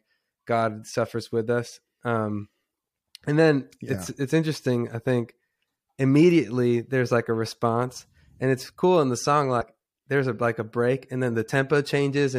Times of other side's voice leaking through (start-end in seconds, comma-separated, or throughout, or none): none